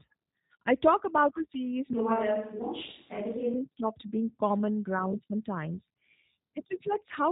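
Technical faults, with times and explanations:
throughout G.729 codec: Nothing above 3.8 kHz survives, and the speech has a rough, synthetic edge. That fits 8 kbit/s G.729A coding, which rebuilds each 10 ms frame from a vocal tract filter, a pitch predictor and a few pulses, discarding fine waveform detail.
1.93 to 3.54 s switch to a distant microphone: After "talk about a series" the voice abruptly turns roomy and hollow, with thinner bass and faint room noise, though the level barely changes. It snaps back before "stopped being common ground", likely from a brief fallback to a farther microphone.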